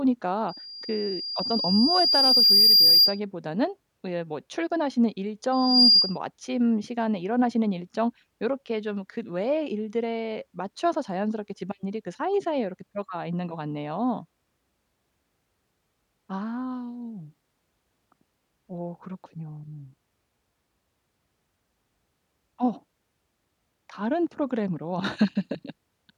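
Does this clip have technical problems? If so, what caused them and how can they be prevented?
Yes. Loudspeaker feedback squeal at 0.48–3.2 s and 5.52–6.18 s: the microphone re-amplifies its own loudspeaker, so a 4.8 kHz tone swells well above the speech. On a spectrogram it appears as a bright horizontal line. Lower the gain, or move the microphone out of the speaker's path, to prevent it.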